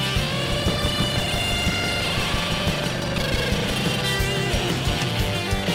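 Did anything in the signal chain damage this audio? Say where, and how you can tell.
Yes: buffer tearing in the driver buffer, 0.44 to 3.96 s. Roughly half of each period replays older audio, causing a 25 Hz rattle and spectrogram seams every 40 ms.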